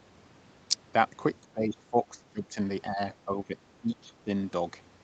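From 1.41 to 2.59 s, then 2.89 to 3.0, 3.25 to 3.58 and 3.81 to 4.3 s, the speech keeps sinking, by up to about 20 dB in the first stretch. That's likely speech suppressed in double talk, with the echo canceller ducking the talker along with the far end.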